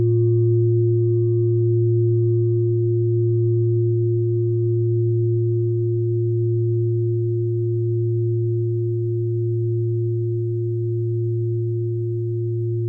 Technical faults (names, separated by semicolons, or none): none